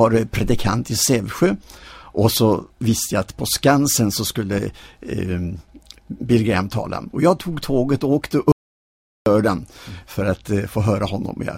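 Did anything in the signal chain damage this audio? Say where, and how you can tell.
Yes. An audio dropout to silence runs from 8.52 to 9.26 s: the sound cuts off abruptly and resumes about 0.74 s later. The waveform goes flat and the spectrogram turns blank, with no room tone. This likely reflects an input device or link loss while the recorder kept writing zeros.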